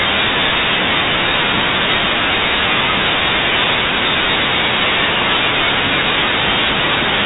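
Listening through this speech recording, nothing stood out, and the telephone-band sound, with nothing above about 3.8 kHz, is just what G.711 telephone coding gives.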